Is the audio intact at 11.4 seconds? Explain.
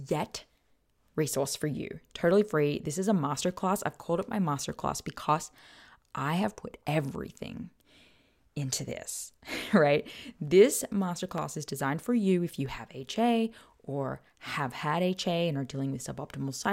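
No. At 11.38 s the stream likely lost a tiny run of dropped samples, well under a millisecond, so the waveform jumps straight to a later value. That discontinuity is heard as a single sharp click just before "is designed for you".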